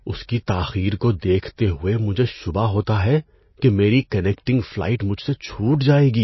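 MP3 compression artefacts run through the whole clip. The speech has plainly audible codec damage: nothing remains above about 5.8 kHz, so the top end sounds dull, and the sound has a watery, swirling quality. The likely cause is an MP3 encoder starved of bits, at a rate that fits something near 24 kbps. It cut the treble at a fixed point and dropped weaker frequency lines, which flicker in and out between frames.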